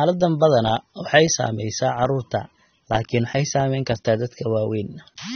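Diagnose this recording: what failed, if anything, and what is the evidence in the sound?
The whole recording is dull, with nothing above 6.3 kHz, and the speech has a plainly audible smeared, warbling, fizzy texture. The codec stage is the likely cause: AAC compression, which fits AAC-LC at around 24 kbps. A simple low-pass or low sample rate would leave the remaining band clean rather than swirly.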